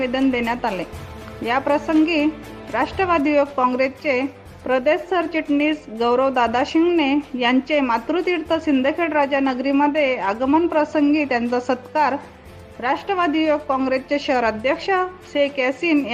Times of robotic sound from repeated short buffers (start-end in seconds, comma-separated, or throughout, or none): none